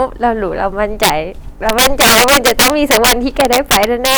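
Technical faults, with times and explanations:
Throughout: integer overflow. The speech is driven about 9 dB past the top of the integer range, and instead of being held at the limit, each sample that goes over wraps around to the opposite extreme. Only a small share of samples, around 3 percent, cross the limit, so the damage falls on the loudest peaks. Each wrapped sample jumps across the full range, producing violent, sharp cracks far harsher than the flattening of ordinary clipping.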